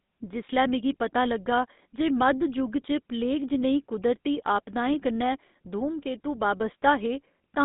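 Speech runs through the GSM full-rate codec for the whole clip. The audio is confined to about 200 Hz to 3.7 kHz. A buzzy, gravelly roughness is plainly audible. It comes from coarse pulse-driven excitation, which fits a 13 kbps full-rate coder.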